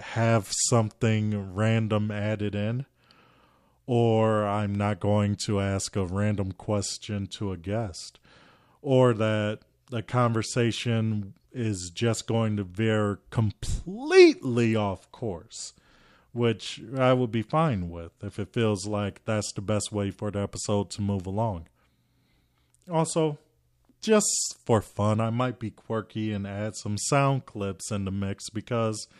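No technical faults can be heard in this recording.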